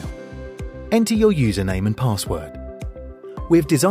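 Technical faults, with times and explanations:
Nothing stood out as a technical problem on listening.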